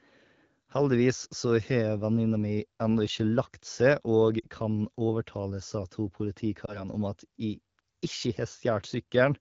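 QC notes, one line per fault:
4.40–4.47 s and 6.66–6.84 s: lost AMR speech frames. Brief dips where the decoder replayed earlier pitch and vocal-tract settings at falling gain, fitting two lost frames, then one.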